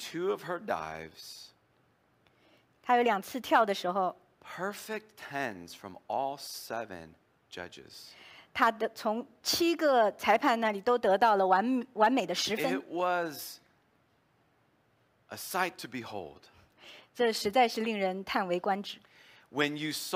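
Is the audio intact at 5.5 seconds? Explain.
Yes, the speech at 5.5 seconds plays through intact, with no dropout, click, distortion or other fault audible at that moment.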